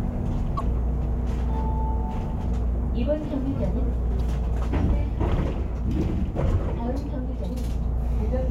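Three short glitches of damaged data in the compressed stream turn up, at 0.56 to 0.61 s, 4.17 to 4.21 s and 7.46 to 7.50 s, each about 40 ms long. Each one is a brief glitch in the sound. At those spots the compressed data itself is corrupted, so the decoder misreads the frames, loses sync and has to hunt for the next valid frame header before it plays cleanly again.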